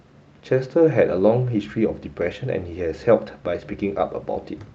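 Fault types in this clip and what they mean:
Speech comes across with the usual coding texture of a call codec and high frequencies rolled off around 8 kHz, which fits an Opus call path at roughly 32 kbps, with no dropouts, clicks or level disturbances to be heard.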